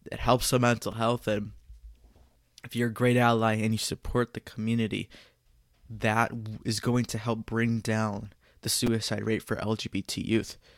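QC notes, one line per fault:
0.92 s and 8.87 s, repeated buffer: a roughly 5 ms piece plays twice after "it helps the mental" and three times after "help bring down the", before "rate for". The late data made the device replay its last buffer, which fits a 5 ms buffer. These are hard-joined copies, not a silent gap, so they come across as a click and a brief buzz rather than a dropout.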